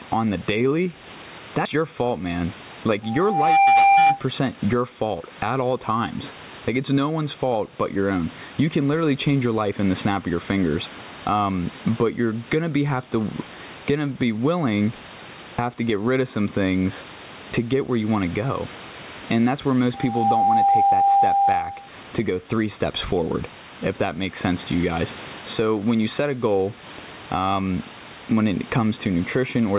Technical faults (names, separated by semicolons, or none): gain pumping